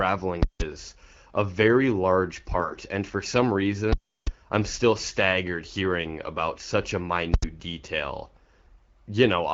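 From 0.43 to 0.60 s there are invalid numbers at full scale: a calculation blew up and pinned a 170 ms block to the rails, which you hear as a loud pop, silence, then another pop. At 2.58 to 2.78 s, AMR bit errors, with roughly 7% of bits flipped, make the speech go hoarse and gargly. The same full-scale blowout returns from 3.93 to 4.27 s, a longer 341 ms gap between pops, and again from 7.34 to 7.42 s, this time a brief 85 ms block.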